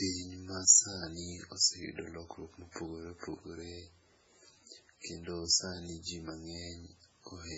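Speech with heavy MP3 compression throughout: a watery, swirly quality and smeared consonants, likely from a very low bitrate, around 16 kbps.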